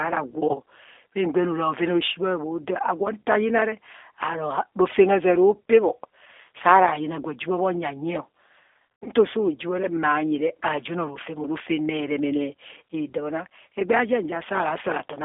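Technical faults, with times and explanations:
Throughout: G.729 codec. The speech is confined to roughly 300 Hz to 3.6 kHz. It sounds rough and slightly synthetic. The decoder rebuilds each 10 ms frame from a vocal tract filter, a pitch predictor and a few pulses. The sound fits an 8 kbit/s G.729A stream.
0.52–0.56 s and 9.01–9.10 s: VoIP packet loss concealed by the speech codec. The first gap is brief, covering 20 ms of lost audio. The second scatters 140 ms of losses over 200 ms, with a longest run of 60 ms. In both, the decoder stretches its last pitch and filter into a buzzy tone or coloured noise that fades. The sound stays weak briefly after.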